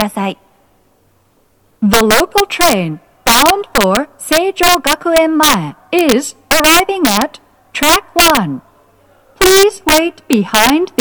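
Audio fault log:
Throughout: integer overflow, peaks driven about 8 dB past the limit wrap to the opposite sign, giving violent cracks on a small share of samples, far harsher than clipping's flattened tops.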